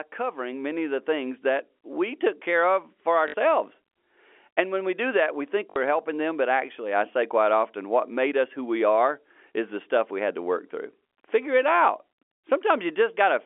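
A speech recording carried over a narrowband telephone line, with nothing above about 3.4 kHz. From 0.16 to 2.26 s, automatic gain rising is heard. The level climbs by about 5 dB over two seconds, ending just before "care of for". The gain control judged the input too quiet and turned it up slowly, so voice and background swell together. Packet loss with the last packet repeated occurs twice. At 3.28 to 3.34 s, right after "care of for", 60 ms of audio is missing. At 5.70 to 5.76 s, between "do that we think" and "helping them but actually", the same happens. Each gap sounds like a brief robotic stutter. The receiver replayed the last packet it had until new data arrived. The buzz fits 20 ms packets, repeating at 50 Hz.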